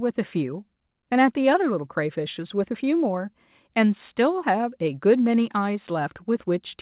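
Speech, with nothing technically wrong with it; the top end stops at about 4 kHz, as expected from the G.711 call codec it passed through.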